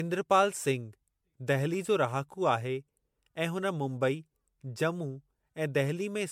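Throughout the speech there is a swirly, smeared, hollow quality, with blurred consonant attacks and a band limit at 19.8 kHz. The damage is heavier than a single MP3 encode at a rate around 96 kbit/s would leave, which points to generation loss, likely from about seven rounds of decoding and re-encoding. Each pass quantised on a shifted frame grid, so the noise and spectral holes from every pass piled up.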